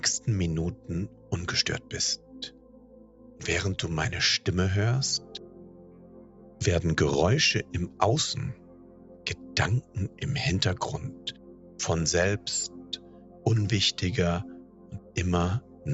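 A noise suppressor applied to music or sounds pumps the level by about 10 dB, treating held tones and tails as noise; the waveform shows attacks intact but bodies shrinking. Sound cut by the noise suppressor occurs at 0.19–3.42, 5.19–6.61, 7.63–8.01, 8.54–10.22, 11.11–11.79, 12.68–13.46 and 14.43–15.87 s, dropping about 10 dB. On a spectrogram these stretches look like darker stretches and abruptly truncated decays, under the call path's 8 kHz ceiling.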